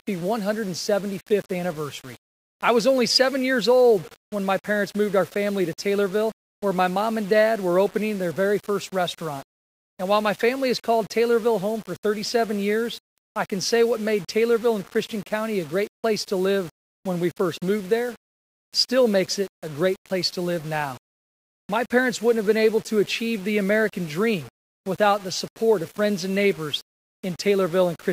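Throughout, low bit depth without dither leaves grainy distortion that moves with the sound, roughly 25 dB below it. It likely comes from rounding to about 6 bits. The waveform shows coarse stair-steps, and the spectrogram shows signal-dependent hash rather than a steady noise floor.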